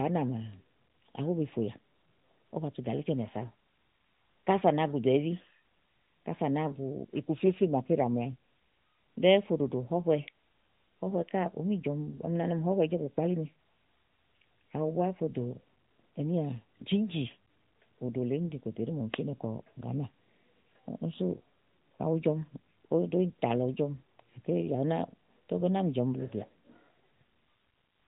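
No technical faults can be heard anywhere in the recording.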